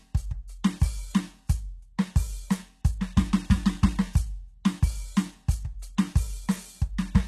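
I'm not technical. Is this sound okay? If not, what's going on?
No, it isn't quite right. All the way through, the music's top end sounds fake: bright but gritty and metallic, with nothing above about 12 kHz. That's likely HE-AAC compression, which guesses at the treble by copying lower sounds upward instead of keeping the real ones.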